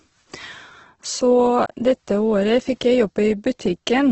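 Throughout, the speech is band-limited with nothing above 8.1 kHz and sounds rough and grainy, the likely result of heavy Opus compression at a rate that fits about 12 kbps. Unlike MP3's swirling holes, starved bands are filled with noise, so tones turn noisy rather than watery.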